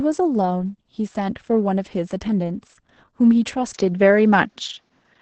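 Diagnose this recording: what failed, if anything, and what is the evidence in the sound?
The codec stage failed first, and the damage runs through the whole recording. The speech carries heavy Opus voice compression. Nothing reaches above about 8.6 kHz, so the top is cut off. The speech sounds hoarse, with a slightly robotic, muffled grain. The sound points to about 10 kbps in the SILK linear-prediction mode, coded in 20 ms frames. At that rate the excitation is quantised coarsely, and detail is lost.

A second change starts at 3.72 s and lasts to the end. There is a silence of about 20 ms. Then the band narrows to nothing above about 7.2 kHz, and the tone turns duller. The level shifts by around 5 dB. A new, faint noise floor appears, roughly 50 dB below the speech. This is likely an input switched to a poorer device at the capture stage, with its own response and its own noise.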